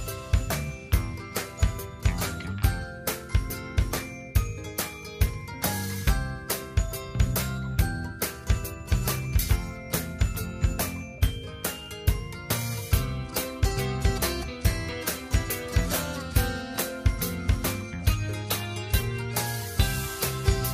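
Nothing technically wrong can be heard in this recording. No fault shows up anywhere in the audio.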